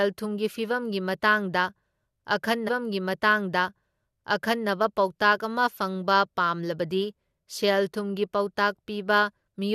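From 2.67 to 4.67 s, a stream segment repeated: the player queued the same two seconds twice, so that stretch replays after a blip, unlike a stutter's short loops.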